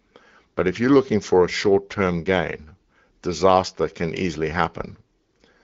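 No technical faults are audible.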